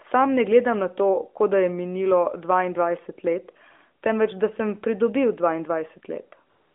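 A speech recording carried over an AMR narrowband mobile link, heard band-limited to 250 Hz to 3.5 kHz, ends with AMR comfort noise from 6.50 to 6.75 s. For about 255 ms the phone sent no speech frames, so the receiver filled the pause with a smooth, steady synthetic hiss in place of the real background. Unlike a dropout or noise gate, the gap isn't silent. It is even, featureless noise that switches in.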